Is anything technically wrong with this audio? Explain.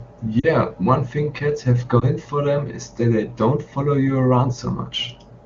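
Yes, two brief dropouts. Lost AMR speech frames, at 0.39 to 0.46 s and 1.99 to 2.05 s: radio errors corrupted frames, so the decoder reused the last good pitch and vocal tract settings at falling gain. The result is a drop to near silence and then a short dip or warble, 40 ms and then 20 ms, which fits two lost 20 ms frames and then one.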